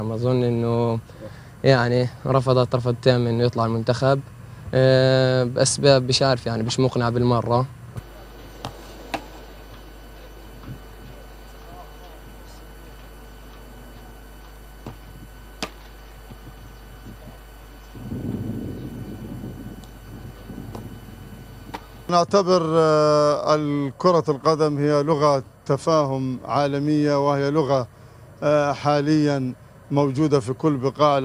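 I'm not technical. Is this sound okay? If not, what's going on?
Yes, nothing wrong can be heard.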